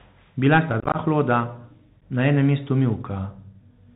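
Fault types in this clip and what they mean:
Bluetooth CVSD headset codec: The speech crossed a narrowband CVSD link, a one-bit-per-sample delta coder that fits the 64 kbps headset path. Everything above 4 kHz is gone, sibilants turn scratchy, loud bright sounds distort, and granular hiss runs underneath throughout.
Unconcealed Bluetooth headset packet loss: Voice packets between headset and phone went missing and nothing filled the gaps. From 0.80 to 0.97 s about 86 ms drops out in scattered holes up to 22.5 ms long, sounding chopped and crackly. A single brief gap follows at 2.01 s.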